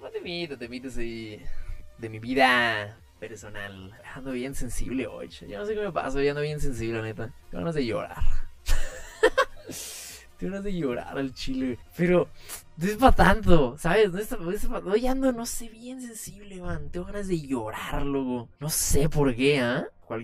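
Channel delay (comb filtering) runs through the whole audio: one channel trails the other by about 10 ms before the mono sum, cutting fixed notches from around 40 Hz upward at even spacing. The hollow, phasey colour stays put, unlike a phaser's sweeping notches or reverb's decaying tail.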